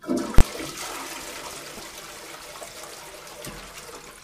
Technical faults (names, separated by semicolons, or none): invalid numbers at full scale